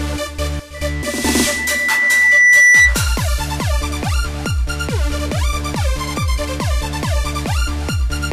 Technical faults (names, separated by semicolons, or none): loudspeaker feedback squeal